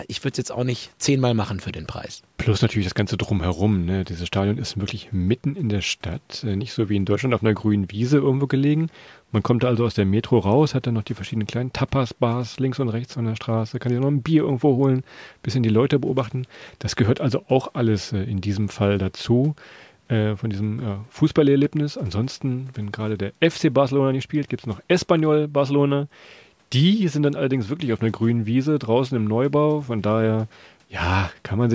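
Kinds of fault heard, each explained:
No kinds of fault are heard in this speech, which has passed through a call's microphone processing.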